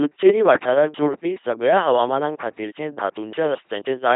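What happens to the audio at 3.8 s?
At 3.8 s the speech is still passing through the LPC-10 vocoder, which runs through the whole clip. Each moment is rebuilt by a roughly ten-pole vocal tract filter fed either a buzzing pulse train or hiss, giving a heavily damaged, mechanical robot voice with nothing above 3.8 kHz, coded at 2.4 kbit/s. What sets it apart from a simple narrowband or low-bitrate waveform codec is the abrupt switching between buzz and hiss.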